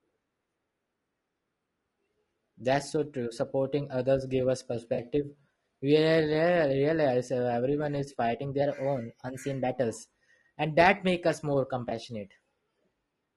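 Throughout, the speech was likely squeezed through low-delay AAC compression (AAC-ELD) at a rate that fits around 32 kbps. Its short frames cannot resolve the pitch harmonics finely, so the voice sounds rough and grainy, with noise filling the gaps between harmonics.

From 4.94 to 5.00 s, and again from 11.89 to 11.92 s, AAC frame loss with concealment occurs. The decoder rebuilt the missing audio (roughly 40 ms, then 20 ms) from the last good spectrum, leaving brief smeared, noisy patches.

From 8.61 to 9.78 s, a drift correction step, likely from clock-matching software adjusting its buffer, raises playback speed by 5.85% in one jump. Pitch rises about 98 cents, nearly a semitone, then snaps back.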